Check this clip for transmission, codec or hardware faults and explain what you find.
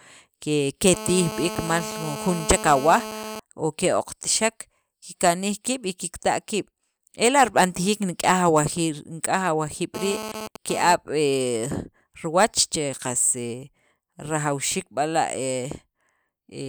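GSM phone buzz appears twice in this speech, from 0.94 to 3.40 s and from 9.95 to 10.95 s. A nearby 2G handset transmits in short radio bursts about 217 times a second, and something in the audio chain rectifies those pulses into audible current. The result is a hard, raspy buzz at 217 Hz, rich in harmonics, sitting about 10 dB below the speech. In the first stretch it holds steady, as during a call. In the second it stutters on and off, as during a data transfer.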